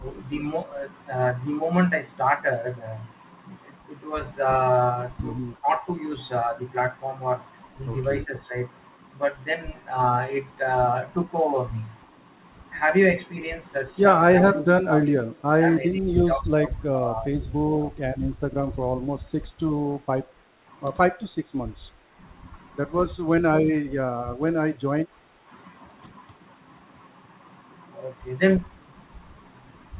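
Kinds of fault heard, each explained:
Speech suppressed in double talk: The talker's level dips or cuts out in pieces, most likely because the echo canceller couldn't tell them from the far-end echo and pulled both down. Short bites at 5.59, 8.24, 23.83 and 25.22 s, a deep one near 14.4 s, and a long ragged stretch from 15.59 to 18.27 s.
Background gated by the echo canceller: While the loudspeaker was playing, the canceller clamped the mic, so the room tone briefly sinks by about 8 dB and then comes back. It happens from 20.28 to 20.65 s and again from 21.9 to 22.1 s.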